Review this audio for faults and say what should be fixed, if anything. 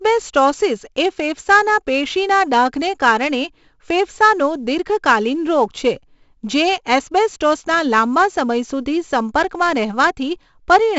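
The whole clip was stored as 4-bit ADPCM compression, with each sample coded as a coarse step from a prediction. Nothing above 7.7 kHz fits a 16 kHz rate at 64 kbps. The heavy damage shows as gritty hiss on loud speech, distorted attacks and a dull top. Keeping the master as 16-bit PCM at a higher sample rate, or using a modern codec, would prevent it.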